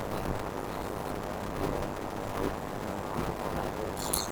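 A block size mismatch (padded) runs through the whole clip: each written block, which fits 256 samples, lands in a longer read block topped up with silence. The gaps buzz at 100 Hz, and the speech plays at 0.533 times normal speed with its timbre intact.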